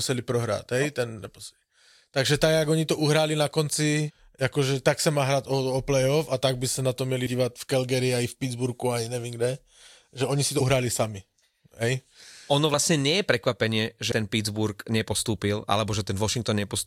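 Compressed frames skipped six times, at 1.25 s, 4.08 to 4.11 s, 7.25 s, 10.60 s, 12.74 s and 14.11 s. Each time, whole frames of the encoded speech never reach the output. They were lost from the file or rejected as damaged by the decoder. The speech jumps forward, mostly by around a tenth of a second. The jump near 4.1 s is larger, about a fifth.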